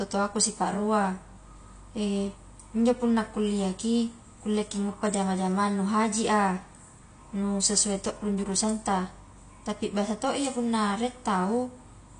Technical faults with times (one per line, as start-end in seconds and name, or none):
0.00-12.19 AAC compression